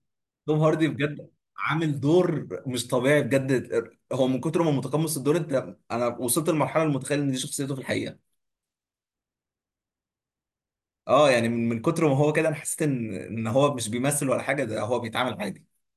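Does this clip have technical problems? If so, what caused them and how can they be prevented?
No, nothing in this speech recording points to a technical fault, so there is no cause to trace and nothing to prevent.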